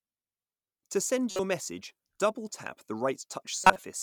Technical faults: corrupt frame decoded

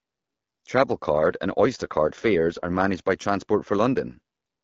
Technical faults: AMR rate drop

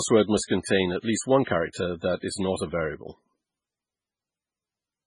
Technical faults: MP3 compression; pre-echo

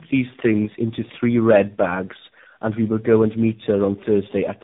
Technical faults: tandem speech coding

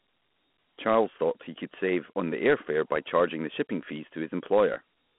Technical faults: Dialogic VOX ADPCM

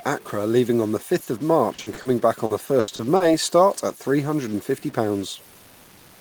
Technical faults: stuck bit; short stall from a late packet; repeated packet loss (robotic sound); jitter buffer slow-down

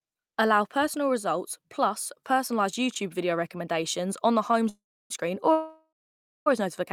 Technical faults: short stall from a late packet; call audio freeze

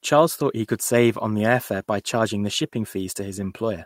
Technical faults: none

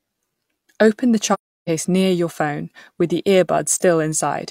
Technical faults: AAC frame loss with muting

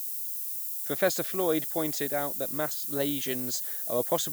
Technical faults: low bit depth with noise shaping

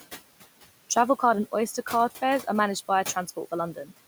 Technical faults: noise suppressor artifacts; speech cut by the noise suppressor

